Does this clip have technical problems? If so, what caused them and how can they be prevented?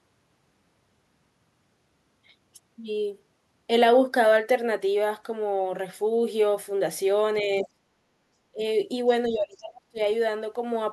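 Yes. The speech drops out at 7.41–7.77 s, 8.52–8.63 s and 9.28–9.99 s, by roughly 20 to 30 dB. This is likely speech suppressed in double talk, where the echo canceller ducked everything while both sides talked. Better full-duplex tuning or headsets prevent it.

At 7.56–7.66 s, a faint second voice about 20 dB under the speech comes through. That's likely the other side's voice leaking through from the loudspeaker. Headphones or stronger echo cancellation would stop it.

Between 8.05 and 8.14 s, the room tone dips about 8 dB. That's background gated by the echo canceller while the loudspeaker played. Gentler suppression settings would keep it steady.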